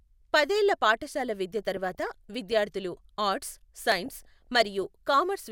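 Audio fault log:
1.46 s and 3.92 s, dropped buffer (overrun): each time the sound skips ahead by roughly 5 ms with no silence, likely because samples were overwritten before being read. The waveform shows a sudden step; the spectrogram shows a thin broadband vertical line.
1.62 to 2.57 s and 4.06 to 4.83 s, DAB burbling: a fraction of a percent of bit errors slip past error correction, so wrong samples put short blips of noise into single sub-bands. The spectrogram shows scattered short rectangular blocks flaring in isolated frequency bands.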